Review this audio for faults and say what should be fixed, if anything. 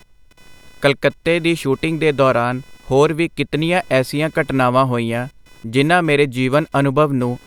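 Computer activity noise runs throughout: buzzy chirping near 500 Hz, roughly 35 dB under the speech, from computer load shifting the shared audio ground. To prevent it, record through an isolated external audio interface or add a ground-loop isolator.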